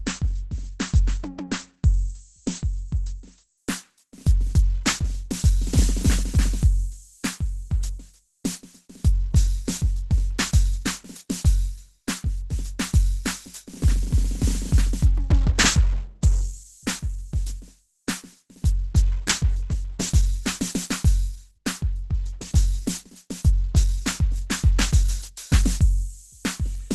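The music sounds muffled, hoarse and grainy throughout, with nothing above 12.1 kHz: likely Opus compression in hybrid mode, fitting about 12 kbps.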